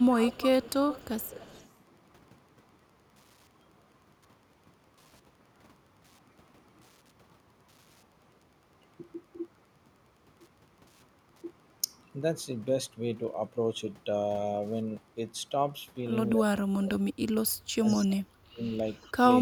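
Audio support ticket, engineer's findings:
Wi-Fi interference, whole clip. Steady ticking near 10 per second under the sound, about 40 dB below signal. The spacing fits a 102.4 ms beacon from a nearby Wi-Fi radio, rectified by the audio circuit. Spectrogram: thin vertical broadband lines repeating every 102.4 ms, visible in pauses. Waveform: small regular spikes in the noise floor between phrases. Fix: shield or reroute the audio wiring, move the router or Wi-Fi module away.

Speech suppressed in double talk at 0.0–0.4 s, 1.17–1.56 s, 16.35–16.98 s and 17.78–18.62 s. Level dips and chopping, about 15 dB deep early on and about 30 dB later, with dull or missing high end. Likely cause: the echo canceller could not tell the near talker from the far-end echo and attenuated both. Spectrogram: brief dark gaps and upper bands fading inside the speech. Waveform: sudden envelope notches during the phrases.

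Echo leak at 0.17–1.69 s, 17.86–17.94 s and 18.97–19.11 s. A faint delayed repeat of the speech. The delay is 290 ms in the first event and about 330 ms in the later two. The level sits well below the direct speech in the first event and becomes quieter still by the last. Likely cause: a far-end loudspeaker path whose echo canceller left residual pickup. Spectrogram: weaker shifted copy of harmonic patterns. Waveform: small trailing bursts after phrases.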